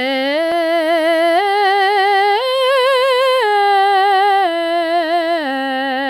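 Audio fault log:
No technical faults are audible anywhere in this music recording, and the signal holds steady and intact throughout.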